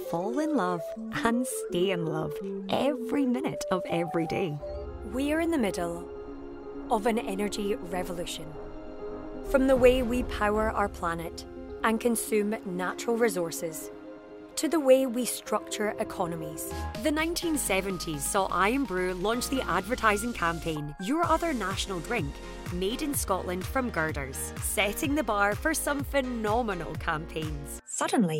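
No technical faults turn up anywhere in the clip, so there's nothing to flag here.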